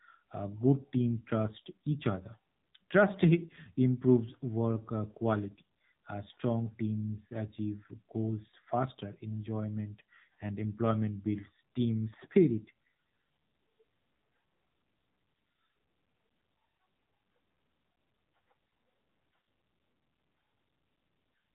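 AMR narrowband mobile codec damage runs throughout: nothing passes above 3.8 kHz, and the plainly buzzy, synthetic speech suggests a low bitrate near 7.4 kbps.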